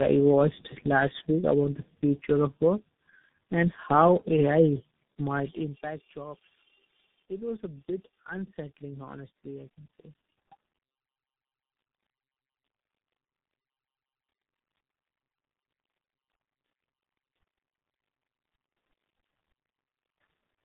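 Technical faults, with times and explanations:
Throughout, tandem speech coding: the speech sounds rough, muffled and warbly, with nothing above 3.8 kHz. The texture points to three low-rate speech coders in series, likely ending in something like G.723.1 at 6.3 kbit/s. Each stage decodes the speech and then re-encodes it, so every coder models the artefacts left by the one before. The buzz and swirl therefore pile up beyond what any single link would produce.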